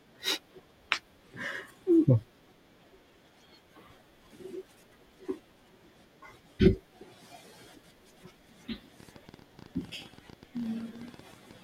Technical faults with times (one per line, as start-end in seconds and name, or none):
9.00-11.52 train of clicks